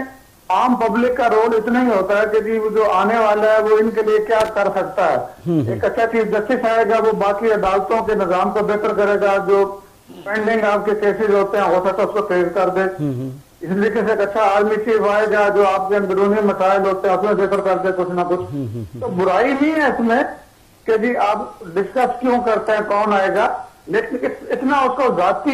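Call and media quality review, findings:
Loose connector crackle, 4.40 to 4.48 s: short irregular scratchy burst, about 80 ms. Probably a worn or dirty jack or cable contact flickering open and shut, chopping the signal and popping on any DC sitting on the line.

Adaptive stream at a lower bitrate, 17.25 s to the end: sudden quality step down with no gap, treble thins, nothing above 14.9 kHz. Sounds like the player fell back from a mid-rate AAC rendition to a low-rate HE-AAC one after the connection slowed.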